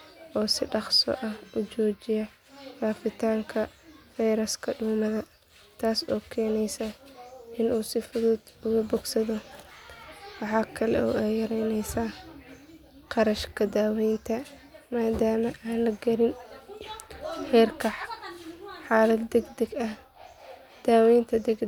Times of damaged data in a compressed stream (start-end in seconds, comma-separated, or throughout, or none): none